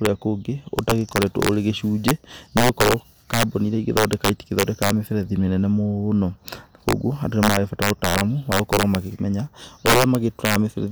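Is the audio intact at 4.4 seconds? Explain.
No. Integer overflow runs through the whole clip, including 4.4 seconds. Loud speech peaks are driven about 7 dB past the integer limit. Instead of being capped, they wrap to the opposite sign. Under one percent of samples flip like this. Each flip is a violent crack, far harsher than clipping.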